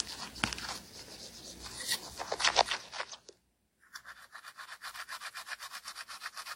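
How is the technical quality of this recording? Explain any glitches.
The recording carries a layered coding fault from start to finish, through all 6.6 seconds.

Transcoding between lossy codecs: there is no content above about 16.2 kHz, and the remaining detail has the artefacts of several codecs heard together. The likely cause is the audio passing through several lossy encoders in turn. The pattern fits an early low-bitrate HE-AAC stage, followed by WMA and finally AAC-LC at around 64 kbit/s. Each later encoder spends bits re-encoding the damage left by the one before and then adds its own, while the lowest cut-off in the chain stays. A single low-bitrate encode would leave only one consistent texture, not these mismatched layers.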